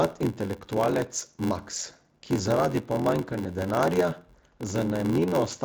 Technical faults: block size mismatch (padded)

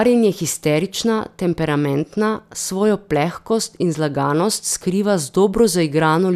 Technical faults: none

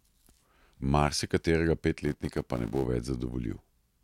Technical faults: filter restarted on every block

